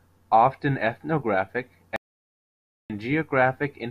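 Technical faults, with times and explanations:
1.96–2.90 s, audio dropout to silence: the speech cuts off mid-flow into silence with no room tone for about 0.94 s, likely a lost input link while recording continued writing silence.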